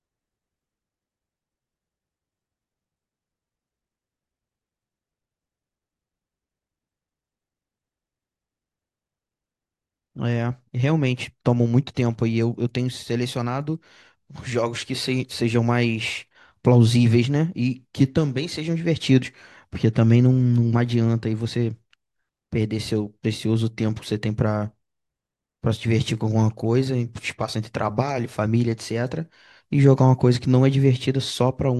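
No technical faults are audible.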